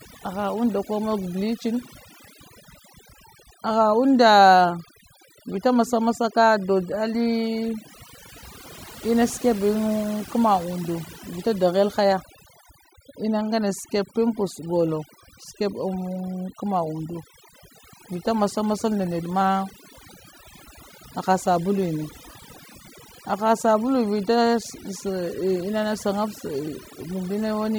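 Overdone noise removal runs throughout: bins near the noise estimate are pulled down, leaving twinkling specks in near-silence, unlike a gate's clean on-off pumping.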